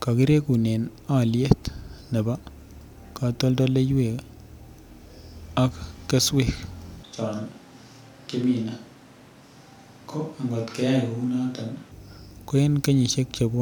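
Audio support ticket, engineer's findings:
Switch to a distant microphone, 7.03 to 11.91 s, right after "ak keswek". Speech turns abruptly roomy and hollow, bass thins, level drops about 5 dB. Background noise rises to roughly 25 dB under the speech. Likely cause: close mic signal lost, a far mic filling in. Sudden return at 11.91 s.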